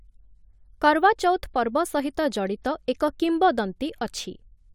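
A speech clip with nothing technically wrong with it.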